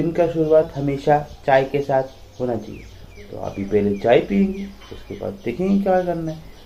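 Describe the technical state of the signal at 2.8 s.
At 2.8 s the audio is near the end of a drift correction step running from 0.62 to 2.93 s. Playback is about 5.7% fast and roughly a semitone (97 cents) sharp, likely from clock-matching software rate-stepping to balance its buffer. Unlike wow, the shift is a steady block that snaps back abruptly.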